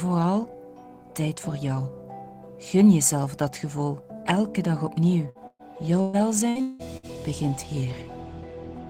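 A burst of packet loss hits twice in quick succession: packets went missing or arrived too late from 5.29 to 5.38 s and again from 5.47 to 5.62 s. Each time the receiver extended the last sound to cover the hole, about 56 ms in the first and about 122 ms in the second, so a brief held buzz or fading hiss replaces the real audio. In the longer gap the patch dies away into roughly 40 ms of silence before playback resumes further on, leaving about 60 ms and 120 ms of the sound skipped. Then, from 6.01 to 7.06 s, repeated packet loss produces a choppy stretch. Four separate holes open within this second, the longest about 180 ms, and each is papered over by continuing the preceding sound. About 40 percent of the span, roughly 420 ms, is this patched filler rather than real audio, so the sound stutters and pieces of it are gone.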